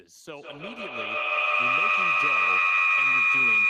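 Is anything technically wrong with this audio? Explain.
Yes, there is a feedback howl from 0.36 s to the end. The microphone-to-loudspeaker loop gains level on each pass, so repeats pulsing roughly every 150 ms grow into a tone around 2 kHz, peaking about 18 dB above the speech. A spectrogram shows a bright band near 2 kHz, and the waveform swells steadily.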